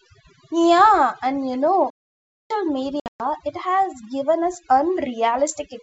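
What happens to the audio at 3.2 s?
At 3.2 s the audio is in the last moments of packet loss on an ADPCM call, which runs from about 3.00 to 3.22 s. Across those 200 ms, 180 ms of sound drops out as hard-edged silence. The longest gap lasts 120 ms. The pattern points to around ten lost packets. After each gap the decoder's predictor and step size no longer match the sender's. The sound comes back slightly distorted before it settles.

Overdone noise removal also affects this moment, as it does the whole clip. The noise reducer is set too strong, so it pushes individual frequency bands far down whenever they sit near its noise estimate. Quiet parts of the speech are cut along with the noise. The background drops and breaks up into twinkling specks.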